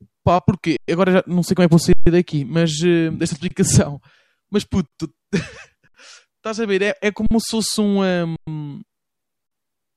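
At 0.77, 1.93 (after "como é que vou"), 3.48, 4.88, 5.88, 7.27, 8.36 and 9.47 s, an underrun with held sample freezes the waveform flat for 23 to 139 ms, with the 46 ms stalls fitting a 2048-sample buffer. Unlike a dropout to silence, each stall starts with little or no click. The speech then resumes softly where it stopped, with nothing skipped.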